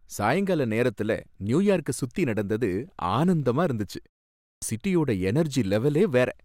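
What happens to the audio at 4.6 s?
Right around there you're hearing a clipped start after a pause: from 4.41 to 4.62 s, about 210 ms of speech simply goes missing. After "நியூயார்க்கசுத்தி நடந்தது ஆனந்தமா இருந்துச்சு" there's a 0.4 s gap, the output device drops into sleep, and it hasn't woken or relocked by the time talking resumes. So the next bit jumps in abruptly out of silence with its opening sounds chopped off.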